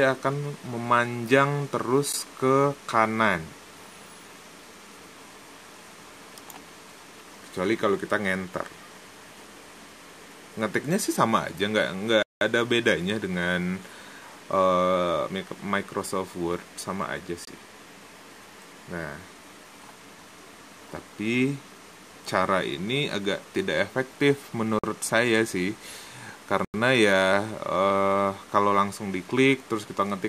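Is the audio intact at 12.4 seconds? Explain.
No. Right around there the sound drops out completely, with a block of digital silence from 12.23 to 12.41 s, about 186 ms of silence, which fits a missed 8192-sample block. It looks like the output buffer wasn't filled in time, so nothing got written there. The audio cuts to silence and back with no fade, and at this length it comes across as a short hole rather than a single tick.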